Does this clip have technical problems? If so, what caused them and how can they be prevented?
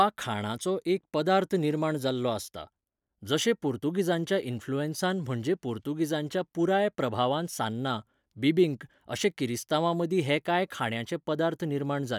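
No, there are no technical problems to report here.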